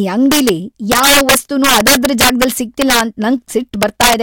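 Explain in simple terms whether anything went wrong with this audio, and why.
Integer overflow went wrong here, and it runs through the whole speech clip. The loudest moments were pushed past the biggest number the system could store, and instead of being held at that ceiling, those values wrapped around to the opposite extreme. Only a small share of the sound goes over, but each time it does, the waveform snaps from top to bottom, so every loud peak comes out as a harsh, violent crack, far sharper than ordinary distortion.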